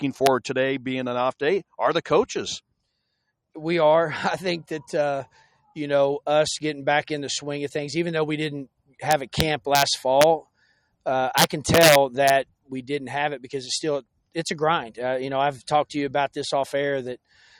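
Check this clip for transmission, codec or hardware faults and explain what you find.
Two faults are present: integer overflow on loud peaks, and a brief cut by the noise suppressor.

Integer overflow occurs at 0.26 s, from 10.21 to 10.24 s, from 9.11 to 9.82 s with peaks about 2 dB over full scale, and from 11.38 to 12.30 s with peaks about 3 dB over. Instead of limiting, over-range samples wrap to the opposite sign, producing harsh cracks far sharper than clipping.

Sound cut by the noise suppressor follows between 12.45 and 12.71 s. The suppressor treats part of the sound as noise and pulls it down by as much as about 18 dB for around 150 ms in total, so the level sinks.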